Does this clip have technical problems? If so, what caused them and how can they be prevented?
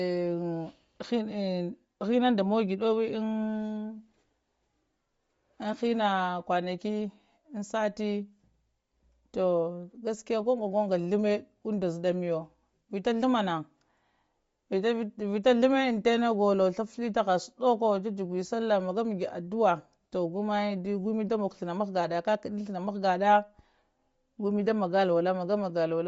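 Yes: likely Bluetooth LC3 compression throughout, at a rate that fits about 32 kbps. Upper spectrum is discarded and noise-filled, leaving breathy, grainy speech with nothing above 7.7 kHz. Prevent it by recording over a wired connection or forcing a higher-bitrate Bluetooth link.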